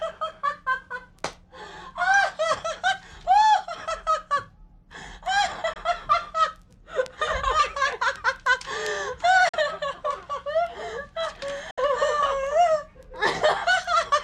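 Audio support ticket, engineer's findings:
Three short silent holes in the audio: 5.73–5.77 s, 9.49–9.55 s, 11.71–11.79 s, roughly 21, 43 and 64 ms long. Sound picks up afterwards as if it kept playing underneath. Likely a Bluetooth dropout on the headphone link: packets arrived late and got binned, so the output just went quiet until good ones turned up. Gap lengths step up in 21 ms units, which fits one, two, then three lost packets.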